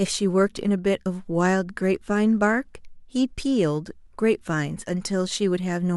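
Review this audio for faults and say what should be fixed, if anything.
No faults heard in the speech, so nothing needs fixing.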